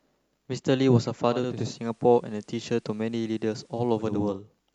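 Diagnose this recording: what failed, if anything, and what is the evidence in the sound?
Receiver stage: digital radio blending to analogue FM from 1.24 to 4.41 s. A 0.46 s cross-fade brings in hiss roughly 40 dB down, with the level about 1 dB lower.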